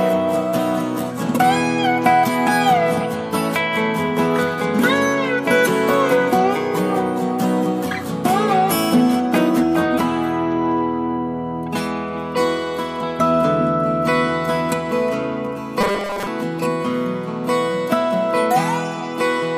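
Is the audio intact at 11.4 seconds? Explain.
Yes, the audio is intact at 11.4 seconds, with no dropout, click, distortion or other fault to be heard at that moment.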